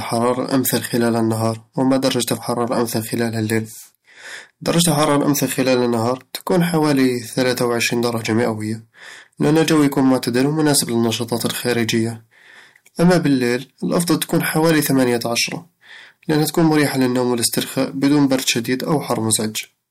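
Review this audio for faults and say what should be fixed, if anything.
Hard clipping runs through the whole recording: the speech was driven roughly 7 dB past what a stage in the chain could pass, so every peak beyond that ceiling was sliced off flat. Only around 2 percent of samples hit the limit, which is why it reads as crackle and grit on louder syllables. On a waveform the peaks show squared-off plateaus; a spectrogram shows vertical smears of harmonics reaching far above the voice's normal range at each clipped moment. Set input gain so peaks stay below full scale, leaving a few decibels of headroom before any converter or fixed-point stage.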